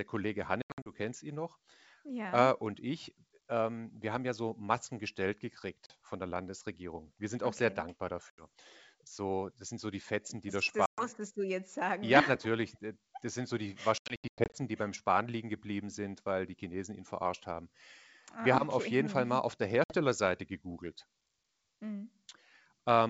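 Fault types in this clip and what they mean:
Packet loss on an ADPCM call: lost packets leave hard-edged silent gaps, and because ADPCM codes each sample as a difference from a prediction, the decoder's predictor and step size no longer match the sender's when audio resumes, so speech comes back slightly distorted. Six episodes occur, from a 40 ms gap just before "von der" to scattered losses near 0.62 to 0.92 s and 13.98 to 14.57 s with runs up to 100 ms. A spectrogram shows blank vertical stripes, and the waveform drops to silence and then restarts abruptly.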